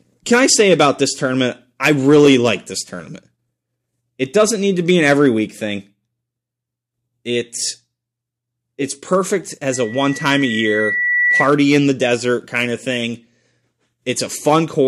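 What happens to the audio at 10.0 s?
A loudspeaker feedback squeal runs from 9.72 s to 11.51 s, just after "it's perfect" and ending before "in the desert kind". The microphone is hearing its own loudspeaker, and at 2 kHz the loop gain climbs past unity, so that one frequency keeps feeding itself. The tone swells over roughly a second and a half into a piercing whistle that reaches about the same loudness as the speech before it stops.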